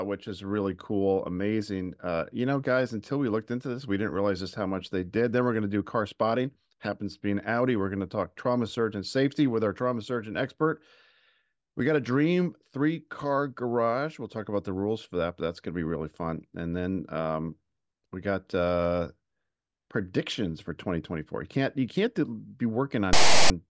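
A speech recording ends on a harsh burst: right after "can't you can't be", from 23.13 to 23.5 s, a loud, buzzy rasp cuts in with hard edges on both sides, lopsided as if pushed off centre. It is file tags played as audio. A block of text metadata near the end of the file has been decoded as sample data. The character bytes sit mostly in one value range, so the waveform is offset to one side and comes out as rasp rather than even hiss.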